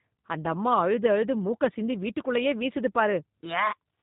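From the first moment to the last, the whole recording carries G.729 codec damage, and it's plainly audible. Everything above 4 kHz is simply gone, so the speech sounds boxed-in and dull. The coder rebuilds each 10 ms frame from a vocal tract model, a pitch predictor and a handful of pulses, which is where that rough, slightly synthetic edge comes from. It fits a low-rate 8 kbit/s G.729A encode.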